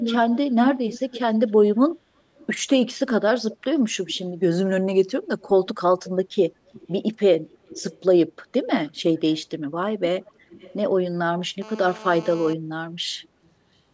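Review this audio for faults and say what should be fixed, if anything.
Echo leak from 0.00 to 1.51 s, 2.36 to 4.18 s, 5.40 to 6.10 s, 6.68 to 6.92 s, 7.49 to 8.01 s, 8.88 to 9.40 s and 10.26 to 10.74 s. A delayed copy of the speech returns. The delay drifts from 324 ms to 383 ms. It is strong in the first segment and faint afterwards. This is likely a far-end loudspeaker whose echo canceller leaves residual pickup. Fix it by having the far end use a headset or improve its acoustic echo cancellation.

GSM phone buzz from 11.62 to 12.54 s. A harsh, harmonic-rich buzz at 217 Hz sits about 18 dB below the signal and holds steady, as during an active call. The audio circuitry is rectifying the handset's burst transmissions. Keep 2G phones away from the microphone, cabling and interface.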